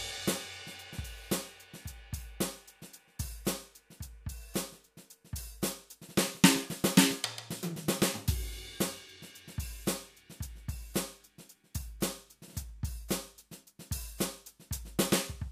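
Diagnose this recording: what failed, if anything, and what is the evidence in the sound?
Nothing in this music recording points to a failure at any stage of the chain, from wiring and conversion through buffering, processing, transport, storage or playback.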